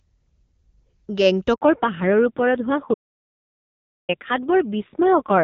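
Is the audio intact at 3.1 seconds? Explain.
No. At 3.1 seconds the audio sits inside an audio dropout to silence that runs from 2.94 to 4.09 s, about 1.15 s long. The input signal was lost, most likely through a disconnected device, a failed link or an accidental mute, while the encoder kept writing silence. The sound cuts off abruptly into silence with no room tone at all, then resumes mid-flow, and whatever was spoken in that stretch is gone.

The same moment also falls within a fallback to narrowband that begins at 1.61 s and lasts to the end. The call moved off the HD Voice wideband codec, which was clear and essentially clean before that point, onto an older narrowband one. The sound points to a low-rate AMR-NB mode around 5.9 kbit/s. From 1.61 s nothing remains above 4 kHz, so the speech on either side of the gap is dull and muffled, with a rougher, grainier texture than before.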